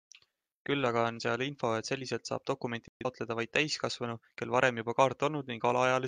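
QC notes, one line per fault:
2.88–3.06 s, digital broadcast dropout: the speech mutes to silence for about 0.18 s, then returns. The receiver hit corrupted or missing frames and muted until clean frames returned. The hole length fits roughly three lost frames. Unlike concealment after packet loss, nothing is smeared or repeated to bridge the gap. Unlike an edit, the speech lost there is gone and the timeline doesn't close up.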